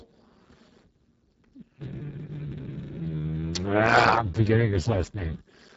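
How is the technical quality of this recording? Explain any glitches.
The technical quality is poor. Speex codec damage runs through the whole clip, and it is heavy. The speech sounds hoarse and noisy, which fits a very low Speex setting, around 6 kbps. At that rate the CELP coder has too few bits to describe the excitation, so the voicing is rebuilt as rough buzz and noise. Nothing is present above 7.7 kHz, and the top band is only a noise-like fill. Unlike MP3 or AAC damage, this has no swirling or watery artefacts. It is a grainy, hoarse roughness.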